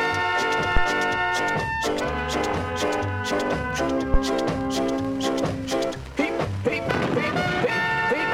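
At 0.77 s a phantom power thump appears, lasting until 0.88 s. A supply switching on or off at a live input sends a voltage step through the coupling capacitors, heard as a deep, dull thud peaking near about -9 dBFS and dying away within 26 ms. A second, shorter thump follows at 4.14 to 4.19 s, decaying in 12 ms. On a waveform each is a sudden one-sided excursion; a spectrogram shows a brief low-frequency blob.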